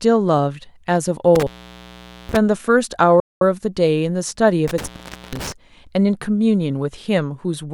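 A loose connection in the signal path produces an intermittent contact from 1.35 to 2.37 s, breaking the line for about 825 ms. The speech cuts out with crackle at both edges. At 3.20 s the output stops for 210 ms and resumes at 3.41 s, a playback stall most likely caused by the player running short of data. The contact fails again from 4.68 to 5.52 s, opening for about 453 ms, with the same crackle-bounded dropout.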